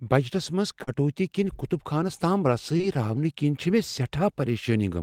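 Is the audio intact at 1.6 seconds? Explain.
Yes, at 1.6 s the speech runs on with no dropout, click, distortion or other fault to be heard.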